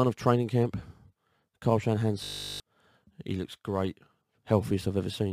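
At 2.24 s the sound locks into a system hang loop that lasts until 2.6 s. The machine or its driver stalled while the audio hardware kept replaying the same 20 ms stretch of its ring buffer, so one tiny fragment repeats exactly, over and over, at 50 Hz. With so short a loop it comes out as a flat, steady buzz rather than a rhythmic stutter. Unlike a plain dropout, the gap is filled with this buzz instead of silence, and roughly 400 ms of real audio is lost before playback resumes.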